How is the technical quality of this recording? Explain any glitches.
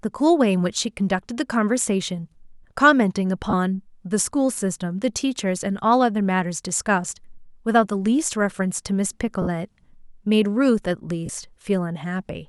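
The speech has four short dropouts from lost LE Audio frames. At 3.50–3.53 s, 7.10 s, 9.42–9.47 s and 11.26–11.29 s, the decoder patches each gap by replaying the last spectrum with scrambled signs, so tones smear into brief noise. The 50 ms gap fades, with lengths fitting 10 ms frames.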